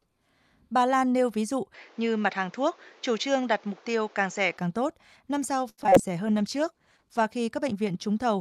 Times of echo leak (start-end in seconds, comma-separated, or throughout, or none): none